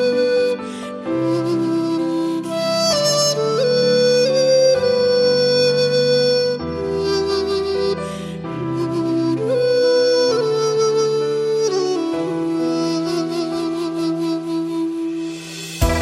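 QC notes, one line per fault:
No fault to note in this clip.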